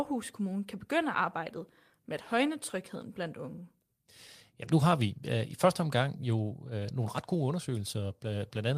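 Nothing stood out as a technical fault anywhere in the recording on listening.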